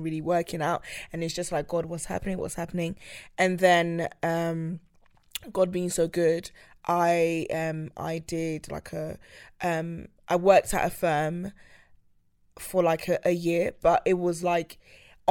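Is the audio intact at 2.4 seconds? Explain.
Yes, at 2.4 seconds the speech is intact, with no dropout, click, distortion or other fault audible at that moment.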